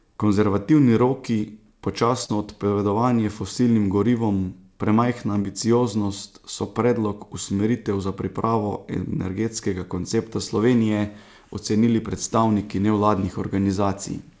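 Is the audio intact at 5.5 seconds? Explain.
No. Just after "odpovedovanje fosilnim gorivom premajhna", from about 5.42 to 5.46 s, there is a short concealed packet loss. Roughly 20 ms of audio never arrived, and the receiver extended the preceding sound for about 17 ms before blending back into the real signal. It is heard as a brief smear or wobble. Unlike a plain dropout, the gap is mostly filled rather than left silent.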